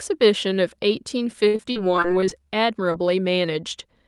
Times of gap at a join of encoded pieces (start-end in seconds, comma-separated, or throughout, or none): none